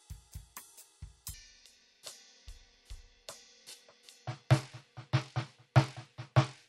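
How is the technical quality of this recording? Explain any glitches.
The recording has one clear fault. From 1.34 s onward, a section at the wrong speed runs at 0.573x, likely from a clock mismatch. The music drops about ten semitones and drags.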